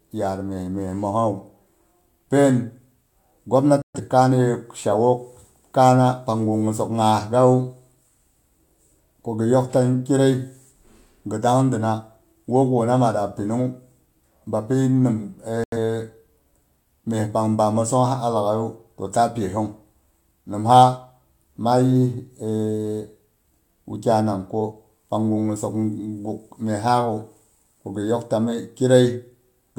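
At about 3.82 s the speech drops out for roughly 0.18 s, then again at 15.64 s for about 0.13 s. That's a digital broadcast dropout: the receiver muted on bad frames, which fits two or three lost frames each time, and that audio's simply gone.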